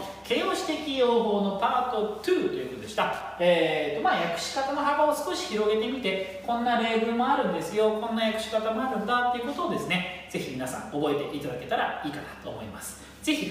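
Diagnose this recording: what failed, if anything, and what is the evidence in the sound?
A worn or dirty contact in the analogue wiring failed briefly: loose connector crackle appears from 3.13 to 3.24 s. As the contact made and broke, the signal was chopped on and off, producing an irregular burst of scratchy crackle lasting about a tenth of a second.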